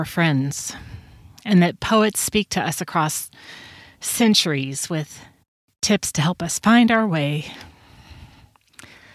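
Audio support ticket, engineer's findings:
Engineer's findings: no audio fault found in this speech clip; nothing to action on this ticket.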